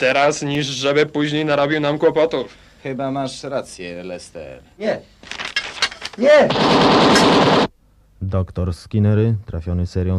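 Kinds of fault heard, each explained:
Block of digital silence: a run of samples replaced by silence, with the sound cutting out and back in with no fade. At 0.55 s the hole is only 0.73 ms, which fits a 32-sample block, so it's heard as a quick tick.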